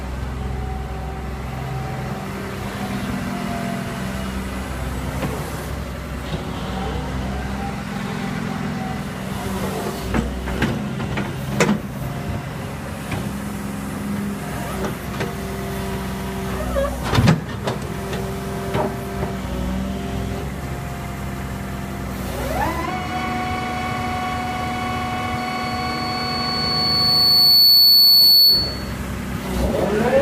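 Loudspeaker feedback squeal from 25.38 to 28.97 s: the microphone re-amplifies its own loudspeaker, a 4.4 kHz tone swelling over about two seconds to roughly 15 dB above the sound.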